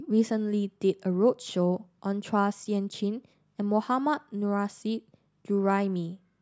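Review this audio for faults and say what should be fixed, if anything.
No faults turn up in this audio, so nothing needs to be fixed.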